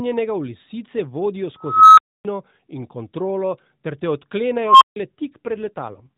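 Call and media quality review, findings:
Unstable filter, two events. A recursive filter in the chain went unstable, its output grew without bound, overflowed, and muted until reset. At 1.61–2.25 s, a tone near 1.5 kHz swells over 0.36 s, clips, then 0.27 s of silence. At 4.57–4.96 s, a tone around 1 kHz builds over 0.24 s, then 0.15 s of silence.

AMR rate drop, 5.46–6.10 s. The network commanded a lower AMR codec mode on a weak link, spending bits on error protection instead of speech. The band is unchanged and there is no gap, but the speech turns rougher and more synthetic, which fits a step down from 12.2 to 5.9 kbps.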